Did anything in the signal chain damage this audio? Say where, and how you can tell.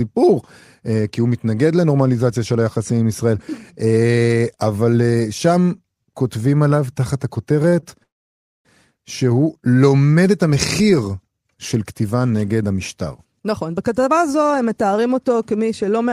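Yes. At the network and jitter-buffer stage, repeated stalls (stutter) appear between 7.62 and 7.93 s: four brief holds, the longest about 34 ms, together filling roughly a quarter of that span. Late packets kept draining the buffer. Unlike a single freeze, nothing fades to silence; the sound just drags in short hiccups.

A call audio freeze follows from 8.03 to 8.66 s. The sound briefly continues, then drops to near-silence for about 0.58 s, inserting roughly 0.62 s before resuming where it stopped. The likely cause is packets held up in transit, emptying the jitter buffer. One long pause, not stutter.

From 13.02 to 15.82 s, a jitter buffer speed-up runs the audio about 7% fast at unchanged pitch, shedding roughly a fifth of a second. The receiver was trimming tiny pitch-period slices to cut excess delay. Pitch staying put distinguishes it from a clock or resampling error.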